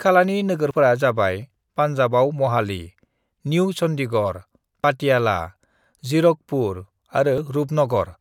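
At 0.71 s, just before "जाबाय पान्जाबाव महाली", then at 4.84 s after "निउ चन्डीगढ़" and at 7.38 s, the speech skips ahead, likely dropped buffers (overrun) losing roughly 30, 20 and 10 ms respectively. The waveform shows abrupt splices, and the spectrogram shows thin vertical broadband lines.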